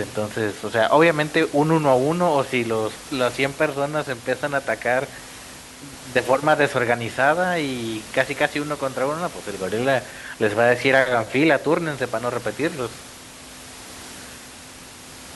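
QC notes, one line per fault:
No faults found; the speech is clean, with the room's background noise sitting about 18 dB beneath it as part of the recording.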